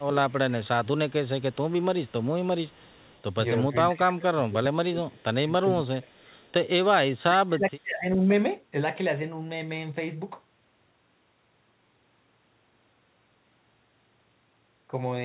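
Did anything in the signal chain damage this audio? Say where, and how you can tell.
Yes. The damage sits in the call processing stage. Echo leak shows up at 0.0 to 0.05 s, 1.09 to 2.27 s, 2.67 to 3.23 s and 6.42 to 6.53 s as a faint duplicate of the speech trailing it by 407 ms, at about 35 dB below the direct signal. Like the rest of the band-limited G.711 audio, this copy stops at 4 kHz. The likely cause is a far-end echo canceller on a loudspeaker endpoint not fully subtracting its microphone pickup, so residual echo returns down the line.

Speech suppressed in double talk appears at 0.04 to 1.37 s, 2.77 to 2.96 s, 3.68 to 6.42 s and 7.15 to 8.2 s, overlapping or adjoining the echo stretches. The speech level dips sharply during these intervals, by roughly 25 dB, and by around 35 dB in the 7.15 to 8.2 s span. This points to the echo canceller or suppressor likely misreading simultaneous talk as echo and attenuating the near-end speech along with the loudspeaker return.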